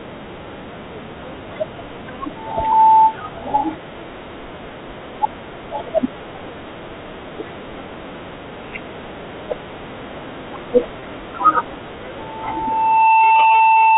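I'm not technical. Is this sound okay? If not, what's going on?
No. Two problems can be heard in this speech.

Loudspeaker feedback squeal occurs twice, as a single steady tone near 886 Hz. The microphone is picking up the speaker it feeds, and that tone keeps re-amplifying itself. It swells over about 0.4 seconds from 2.36 to 3.16 s, then returns at 12.18 s, building over about a second and lasting to the end.

Packet loss with pitch repetition happens at 9.46 to 9.48 s and at 11.00 to 11.02 s. Each time, about 20 ms of sound went missing in transmission, and the receiver filled the gap by repeating the last bit of voice. This is heard as a brief held, buzzy blip. The speech keeps the muffled, phone-line sound of standard telephone coding, which cuts everything above 4 kHz.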